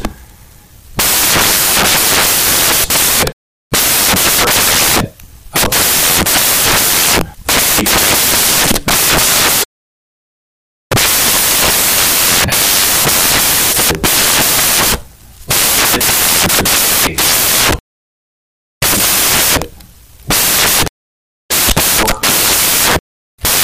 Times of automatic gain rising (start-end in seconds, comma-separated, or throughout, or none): none